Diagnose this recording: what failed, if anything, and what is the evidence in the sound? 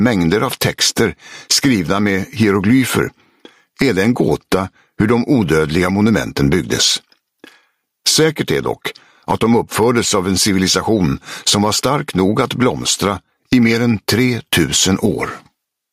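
The input stage is the likely culprit: the microphone gain sits far too high, and a fast limiter or compressor is constantly hauling the level back down. The result is gain pumping across the whole recording, with the gain swinging by around 15 dB. Loud and quiet passages end up squashed close together, leaving a flattened, breathing sound.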